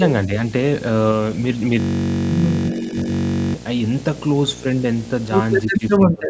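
Speech, carrying a video or display buzz throughout: a steady 60 Hz field-rate buzz with hash above it, sitting roughly 15 dB below the voice, the sign of a screen or video cable coupling into the audio path. From 1.8 s to 3.54 s a system hang loop takes over. A 21.33 ms fragment, which fits a 1024-sample ring buffer, repeats exactly, dozens of times. At that length the repetition fuses into a steady buzz at about 47 Hz instead of a stutter, as the sound hardware keeps cycling the same buffer while the computer or driver is frozen. Speech suppressed in double talk appears twice. From 2.70 s to 3.08 s there is a shallow dip of a few dB, lasting around 300 ms in total. From 5.71 s to the end the level drops much harder, by roughly 25 dB, over about half a second. Both are likely an echo canceller turning the talker down while the far side was also speaking.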